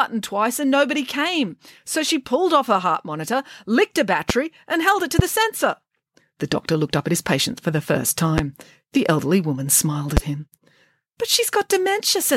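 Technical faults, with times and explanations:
4.30, 5.19, 8.38 and 10.17 s: loud pop. Four isolated sharp pops, each about 27 ms long and peaking about 20 dB above the speech, which carries on uninterrupted underneath. Each is a brief voltage pulse added to the signal, likely from switching or static discharge.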